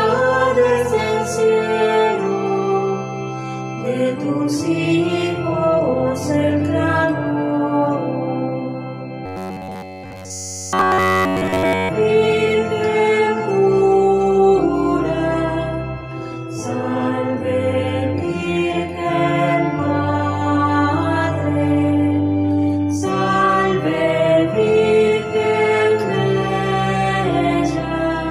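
From 9.26 to 11.89 s the sound turns into a rigid, metallic buzz at about 94 Hz, the robotic sound from repeated short buffers. Audio likely arrived too seldom, so essentially all of this stretch is a loop of roughly 11 ms, with the real signal skipped.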